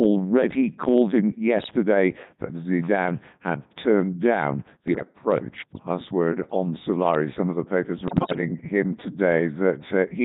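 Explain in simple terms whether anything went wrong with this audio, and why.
Yes, two things went wrong. The whole recording has passed through the Codec 2 vocoder, a very low-rate digital radio voice system. It doesn't keep the actual sound wave. It sends only a rough description of the voice, such as its pitch, loudness and overall tone, and then rebuilds the speech from simple tones. That is why the speech sounds robotic and buzzy from start to finish. Ordinary heavy compression usually sounds muffled or watery, not machine-like.

On top of that, there are short bursts of bit errors on digital voice radio, of the kind heard at the edge of a radio's coverage. They occur at 1.59 to 1.74 seconds, 4.88 to 5.04 seconds, and 8.08 to 8.41 seconds. The last burst is longer and noticeably worse. In these spots a few corrupted bits scramble the description of the voice, so it suddenly jumps in pitch, loudness and tone and turns into bleeps and garbled warbling. 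A simple dropout would go silent instead.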